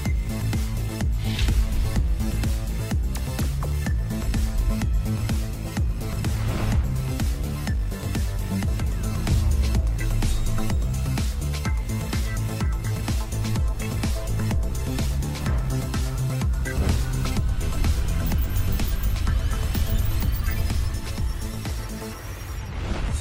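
No technical faults can be heard anywhere in the recording, and the signal holds steady throughout.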